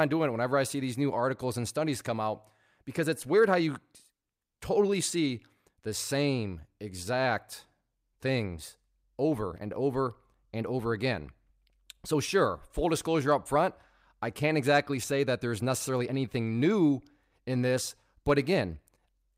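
From the very start there's clock drift between sender and receiver: the sender's clock runs roughly 4 percent fast, so the receiving jitter buffer keeps filling faster than it's played out. You hear it as small timing hiccups scattered unevenly across the whole speech clip.

To keep up, the receiver makes repeated timing corrections from 0.05 s to 19.33 s, trimming short slivers of audio to match the sender's 104 percent pace. Each cut is tiny, but together they give slight skips and a faintly uneven rhythm.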